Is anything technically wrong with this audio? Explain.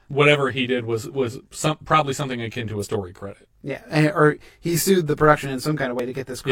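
Yes, there are two problems. Channel delay (comb filtering) runs through the whole speech clip. One channel lags the other by roughly 20 ms, and summing them to mono cancels shared content at regularly spaced frequencies. The first notch sits near 30 Hz, with the rest following at even intervals. The result is rough or slightly doubled, and a spectrogram shows fixed, evenly spaced dark horizontal stripes.

Damaged data in a compressed stream appears from 2.79 to 2.86 s, between "probably something akin to" and "credit yeah", and again at 5.99 s. Corrupted frames make the decoder lose sync and hunt for the next header, producing a brief chirp or blip. On a spectrogram each appears as a short vertical broadband smear, and the waveform shows an abrupt discontinuity.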